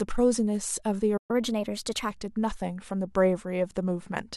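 A playback stall at 1.17 s cuts the speech to silence until 1.31 s, likely because the player ran out of buffered data or its thread was blocked. Catch-up at higher speed follows from 1.31 to 2.11 s: the player resamples its backlog to run 1.15 times faster, so the speech sounds hurried and about two semitones higher before settling back to normal.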